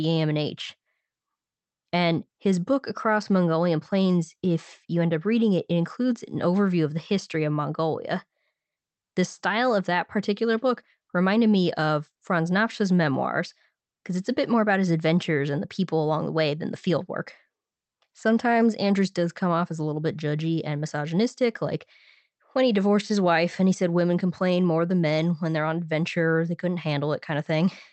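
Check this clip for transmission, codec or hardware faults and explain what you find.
Nothing stood out on listening to this speech recording.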